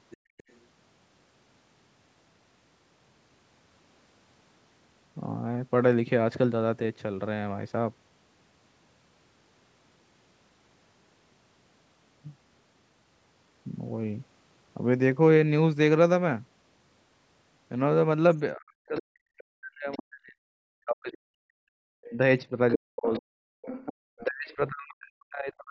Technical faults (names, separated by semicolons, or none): other side's voice leaking through; background gated by the echo canceller; speech suppressed in double talk